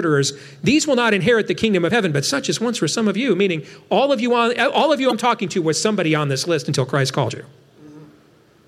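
Damaged data in a compressed stream shows up three times in this speech, at 1.87 to 1.91 s, 5.08 to 5.13 s and 7.25 to 7.30 s, each lasting roughly 40 ms. At each spot some of the encoded bytes are corrupt, so the decoder misreads those frames, loses its place in the stream and has to hunt for the next valid frame header. Each time, the result is a short glitch, a chirp, squawk, click or brief hole, that breaks into the speech.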